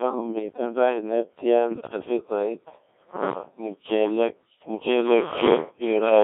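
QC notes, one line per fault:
throughout: Codec 2 vocoder. Speech is robotic, buzzy and heavily mangled within a 200 Hz to 3.7 kHz band, rebuilt from sine waves, which fits a 1.6 kbit/s mode.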